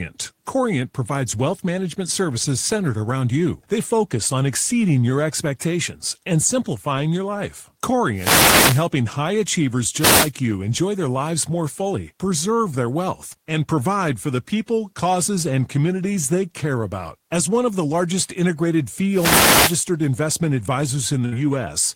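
At 8.14 to 8.88 s, 9.97 to 10.32 s and 19.09 to 19.83 s there are wireless microphone noise hits. The analogue FM link fades as reflected paths cancel, so receiver noise rises through the speech as a brief swish of static. At 21.25 to 21.35 s a burst of packet loss leaves a gap. The receiver stretches the last sound for about 65 ms and fades it down. Speech then resumes roughly 60 ms further on, with that stretch missing.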